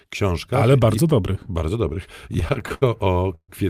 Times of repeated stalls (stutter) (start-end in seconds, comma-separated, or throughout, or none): 2.33-3.50